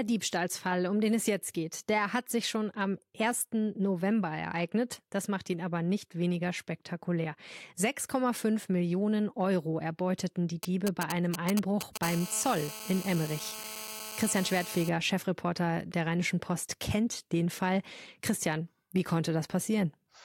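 A 2G mobile phone near the recording chain starts exchanging short control transmissions with its network, and the audio circuitry rectifies those radio pulses into the signal. These GSM signalling bursts run from 10.63 to 11.98 s, right after "erbeuteten die". They come through as a galloping dit-dit-dit of short buzzes pulsing at about 217 Hz, only a few decibels below the speech.

The same phone then settles into continuous transmission as a call is established, sending its time-slotted bursts 216.7 times a second, and the rectified pulses become GSM phone buzz from 12.03 to 14.89 s. It is a steady, raspy 217 Hz drone, rich in harmonics and unrelated to the speech, sitting about 12 dB below it. The buzz holds constant rather than galloping, as expected of an active call.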